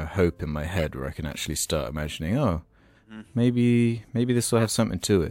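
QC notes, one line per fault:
0.78–0.82 s and 4.59–4.66 s, corrupt frame decoded: bit errors in a compressed frame went undetected and the decoder played it, so misread gains and codes put energy at wrong frequencies. Each short chirpy burst over the speech fits one damaged frame. The second is louder, peaking near -10 dBFS against roughly -20 dBFS.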